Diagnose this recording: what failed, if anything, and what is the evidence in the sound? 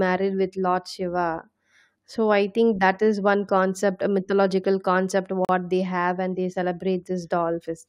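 The failure is at the streaming playback stage: a gap between stream segments. At 5.45 to 5.49 s, between "concept a mythological concept" and "they have and they", the speech stops for 41 ms. The hole has hard edges. Mismatched segment timestamps left it, and the player filled it with silence.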